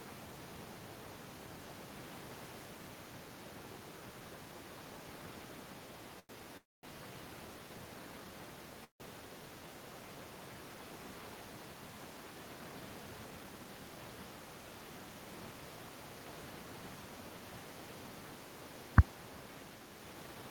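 At 6.19 s a sound is held about 96 ms too long with a slight buzz or dip, a short stall from a late packet: the jitter buffer emptied, so the receiver stretched the last sound until it arrived.

Two call audio freezes follow, at 6.57 to 6.85 s and 8.84 to 9.02 s. Each is a brief fading buzz or hiss, then silence of about 250 ms and 140 ms. The likely cause is delayed packets draining the buffer. Speech resumes where it stopped, with nothing lost.

From 19.99 to 20.50 s the speech sounds hurried, running at 113% speed with unchanged pitch. This is a jitter buffer speed-up: an overfull buffer made the receiver trim roughly 70 ms in small pitch-period pieces.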